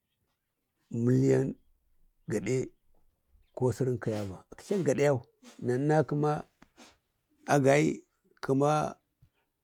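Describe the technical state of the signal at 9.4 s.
At 9.4 s the speech signal is intact, with no audible technical fault at that point.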